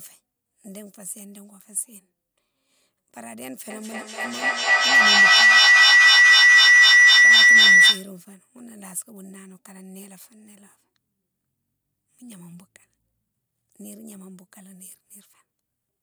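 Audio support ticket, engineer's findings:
Feedback howl, 3.7 to 8.2 s, peaking about 23 dB above speech. Probable cause: two devices sharing one room on the call, closing a mic-to-speaker loop with gain above unity. Narrow tone near 2 kHz, loop repeating roughly every 200 ms. Spectrogram: bright horizontal line. Waveform: swelling envelope, then abrupt collapse.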